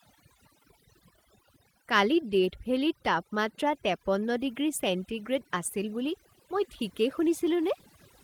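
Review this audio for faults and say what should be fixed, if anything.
Overdone noise removal runs throughout the speech. The reducer is set so hard that any frequency band near its noise estimate is pulled far down or shut off, along with quieter parts of the voice, leaving a lowered, twinkling background.

To prevent it, lower the reduction amount or lower the noise floor threshold, ideally on a cleaner recording.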